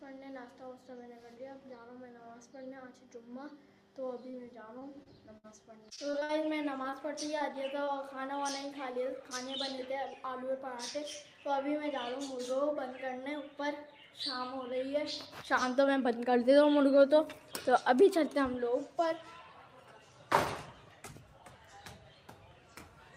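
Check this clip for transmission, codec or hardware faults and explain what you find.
Repeated packet loss (robotic sound) runs from 4.31 to 7.89 s. About a dozen audio chunks went missing or arrived late, and each hole was filled by stretching the preceding sound. The longest gap is 60 ms, and roughly 9% of the stretch is patched, giving a choppy texture with small pieces gone.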